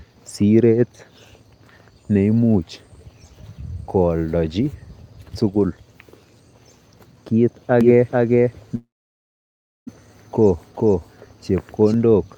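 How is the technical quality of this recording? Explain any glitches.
The recording has two glitches in its second half.

From 7.81 to 11.94 s there is a doubled audio track: a second copy of the speech at about the same level trails by roughly 0.4 s, likely from a slower capture path. It starts and stops abruptly, with no decay, unlike a room echo.

From 8.75 to 9.89 s there is a long network dropout. About 1.1 s of speech is lost, likely in transit. A brief fading fill gives way to about one second of silence before the audio resumes past the missing part, rather than a short click or stutter.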